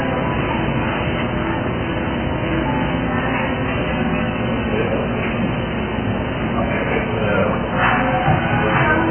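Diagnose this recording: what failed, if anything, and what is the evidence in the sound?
Dull, smeared audio for the whole clip, with nothing at all above about 3.1 kHz and a warbling, fizzy grain on sustained sound. The stage is the codec, most likely AAC compression at a very low rate, consistent with AAC-LC at around 8 kbps. Starved of bits, the encoder pulled its bandwidth down to that cut-off and quantised the remaining spectral lines so coarsely that bands drop out and smear between frames. The damage is heavy throughout.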